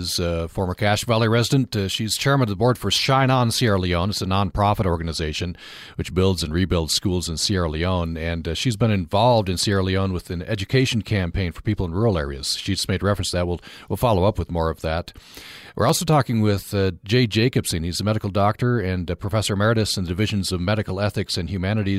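At 15.89 s there's a single sharp click in the speech, and it looks like dropped samples: a tiny slice of the stream, well under a millisecond's worth, likely went missing, so the waveform leaps straight from one value to a later one instead of moving smoothly between them. That gap is far too brief to take out any audible sound. You just get that one abrupt tick, which shows up as a thin vertical line on a spectrogram.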